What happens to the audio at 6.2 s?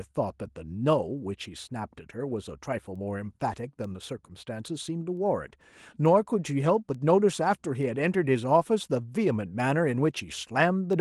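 At 6.2 s the speech sits inside a run of word clock ticks lasting from 0.3 s to 10.93 s. The receiving device runs on its own clock, drifting on the order of 50 ppm from the sender, so each time the two slip, one sample is dropped or repeated. This gives a sharp tick of uneven strength roughly every 0.4 s. The steady rhythm, with no gap or muting, sets it apart from random clicks or buffer dropouts.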